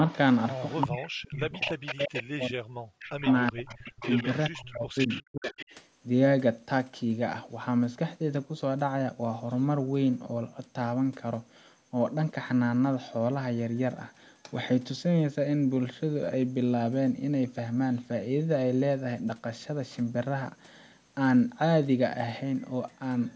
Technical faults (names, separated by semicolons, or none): echo leak; speech suppressed in double talk